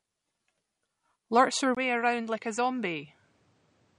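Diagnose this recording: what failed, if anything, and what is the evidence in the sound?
MP3 compression, throughout: a codec-stage fault. Nothing reaches above 11.2 kHz, and the speech sounds plainly watery, which likely points to a low bitrate near 48 kbps.

Input switched to a poorer device, at 1.75 s: a driver-stage change. After a 20 ms silence the band closes to 9.8 kHz, the level drops about 5 dB, and new background noise appears roughly 40 dB below the speech, likely from another microphone.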